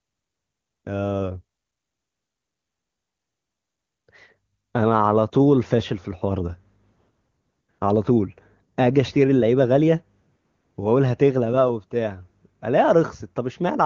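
No technical faults are audible.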